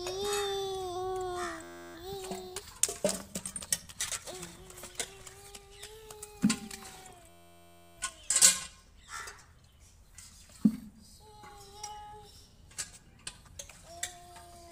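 At 1.63 s the sound locks into a system hang loop until 1.95 s, and it happens again from 7.29 to 7.98 s. Something stalled while the audio hardware kept replaying the same ring buffer, so an 11.61 ms slice repeats dozens of times, which fits a 512-sample buffer. Because the loop is so short it comes out as a steady buzz at about 86.1 Hz. Playback then resumes with little if any audio missing.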